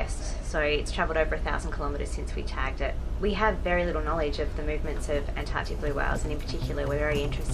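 From 4.84 s to 7.45 s, GSM phone buzz appears: a nearby 2G handset in data transfer emits radio bursts at 216.7 Hz, which the audio circuit rectifies. The result is a raspy, harmonic-rich buzz about 32 dB below the signal, coming and going intermittently.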